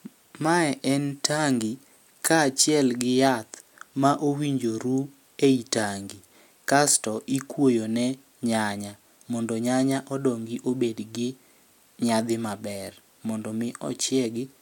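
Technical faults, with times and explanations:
No technical faults can be heard in the speech.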